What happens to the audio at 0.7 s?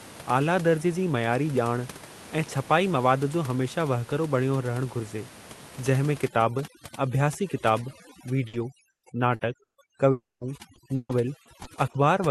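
Nothing goes wrong at 0.7 s: the audio is intact there, with no dropout, glitch or other fault at that moment.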